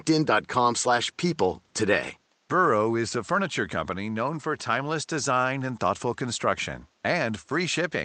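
No technical faults are audible in the speech; the room noise sits about 41 dB below it and belongs to the recording.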